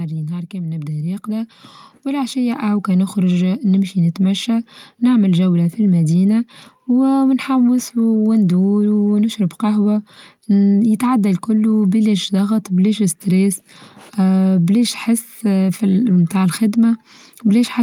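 From 0.5 s to 4.63 s the level climbs steadily by about 11 dB, a case of automatic gain rising. The gain control judged the incoming speech too quiet and wound its gain up over roughly four seconds rather than holding it fixed. Because the whole signal passes through the same stage, the background swells upward together with the voice, so the noise floor audibly lifts along with the speech.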